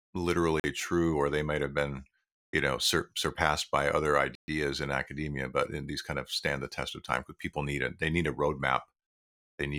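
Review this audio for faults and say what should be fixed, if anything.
Blocks of digital silence appear where the output buffer apparently was not filled in time and was sent as zeros. The first runs from 0.60 to 0.64 s, just before "true or they might". It lasts 43 ms, which fits a 2048-sample buffer. The second, a 128 ms hole from 4.35 to 4.48 s, falls between "surpassed by other" and "in academia but in". Each cuts out and returns with no fade. Giving the audio thread larger buffers or higher scheduling priority would prevent these underruns.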